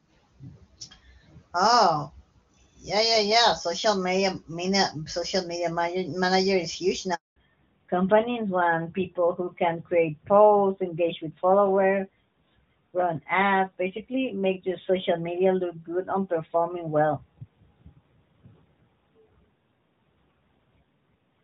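At 7.14 s a handover gap opens: the call moves between networks, no speech frames arrive, and the sound cuts to silence for 220 ms until 7.36 s. From 7.36 s to the end there is a fallback to narrowband. The codec drops from HD Voice to one that fits AMR-NB at 12.2 kbit/s, removing everything above 4 kHz, so the earlier clear wideband speech turns duller and rougher.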